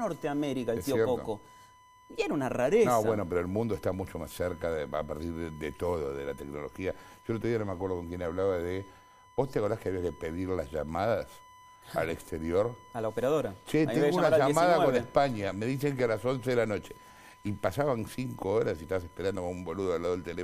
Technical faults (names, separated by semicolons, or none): USB whine